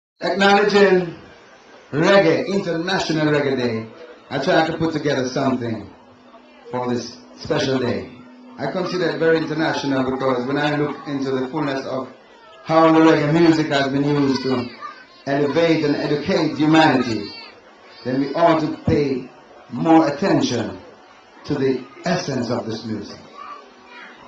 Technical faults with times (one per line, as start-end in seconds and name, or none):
none